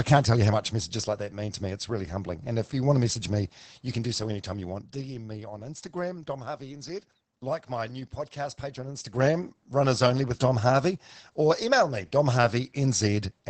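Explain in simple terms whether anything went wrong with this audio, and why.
The speech has been squeezed hard by Opus voice compression from start to finish. The codec ran in its speech-only mode, which rebuilds the speech from a simplified model of the throat and mouth rather than from the actual waveform. At the low data rate used here, that model is coarse, so the speech sounds muffled, slightly hoarse and a little robotic. Everything above about 8.5 kHz was discarded, which removes the crispness of sounds like s and f.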